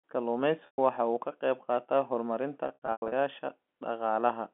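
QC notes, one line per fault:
0.66–0.78 s and 2.68–3.12 s, packet loss with pitch repetition: the first gap is about 120 ms of missing audio; the second, just after "ka qayb qaataa horumarinta", loses about 280 ms scattered across 0.44 s, with runs up to 100 ms. This fits 20 ms packets. The receiver loops the last pitch period, so the sound is a held, buzzy tone fading out rather than a hard silent dropout or click. The clip is carried over the 250–3400 Hz telephone band.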